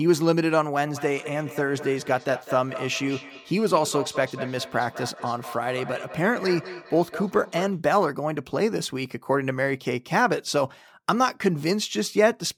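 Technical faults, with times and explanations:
0.83–7.82 s, feedback echo between two devices: a second device's microphone picks up speech replayed nearby and returns it, so each syllable recurs about a fifth of a second later, about 13 dB below the speech. The spectrogram shows fainter delayed copies of each pattern, and the waveform shows smaller trailing bursts.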